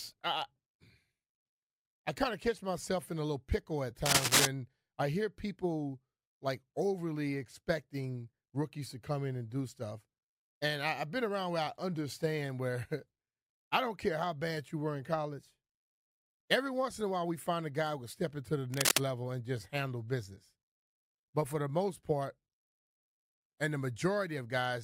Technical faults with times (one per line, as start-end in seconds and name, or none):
4.06-4.46 cable scratch noise
18.72-18.98 cable scratch noise